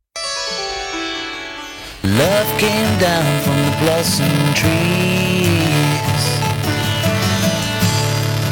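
From 1.85 s to the end, the music has buffer tearing. Writer and reader of the ring buffer cross every period. A small slice of each buffer replays audio about 10 ms old. Hard joins give a steady 375 Hz buzz, fitting a 128-sample buffer.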